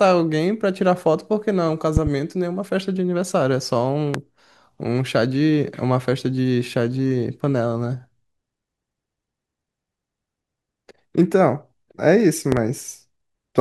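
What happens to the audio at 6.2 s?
Nothing goes wrong at 6.2 s: the speech carries on intact through that moment, with no dropout, click or other fault to be heard.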